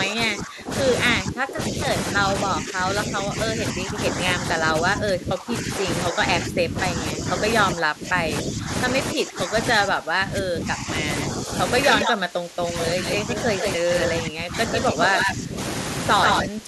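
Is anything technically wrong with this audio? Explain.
Yes. Two related faults recur throughout this speech clip.

Speech suppressed in double talk runs from 0.0 to 11.51 s, from 12.04 to 15.59 s, and again from 16.44 s to the end. The speech dips, thins and drops out in pieces for roughly seven seconds in the first stretch and about two in the second, falling by up to about 20 dB at worst. The likely cause is an echo canceller that couldn't separate the near talker from loudspeaker echo while both sides spoke, so it turned everything down. Unlike a network dropout, the loss follows the overlap and the level sinks rather than cutting cleanly to silence.

Echo leak appears at 11.87 to 12.13 s, 13.07 to 14.07 s, 14.73 to 15.32 s and 16.23 to 16.45 s. In each, a second copy of the speech trails the original by 144 ms. Early on it sits just below the speech, and in the last two it is about as loud. 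This is likely residual loudspeaker pickup that the far end's canceller failed to remove and sent back. Room reverberation smears sound continuously, but this is a distinct, fixed-delay repeat that comes and goes in scraps.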